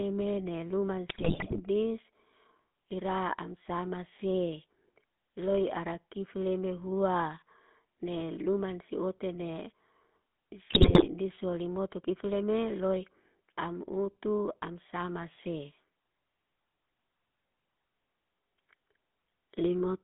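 Throughout, the speech has a buzzy, gravelly roughness and nothing above about 3.5 kHz, the mark of the GSM full-rate codec, which fits a 13 kbps stream that keeps only a coarse, pulse-driven excitation.

From 1.08 to 1.61 s, and again from 10.7 to 11.06 s just before "diso limoto kifleme loy", squawks, pops and gargling break out. These are GSM bit errors: corrupted filter, pitch and gain values bent the spectrum and level.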